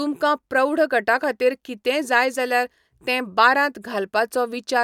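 No technical fault can be heard anywhere in this speech recording.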